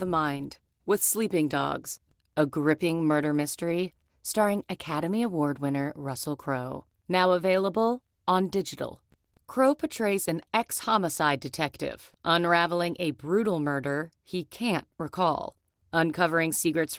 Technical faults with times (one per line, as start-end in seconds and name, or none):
0.00-16.98 Opus voice compression